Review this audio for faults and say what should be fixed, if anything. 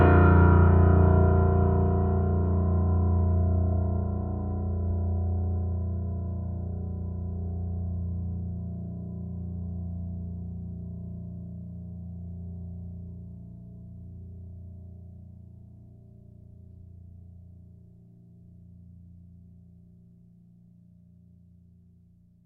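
Nothing stood out on listening to this music, so there is nothing here that needs fixing.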